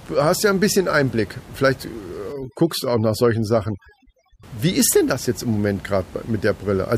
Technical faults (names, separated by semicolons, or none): overdone noise removal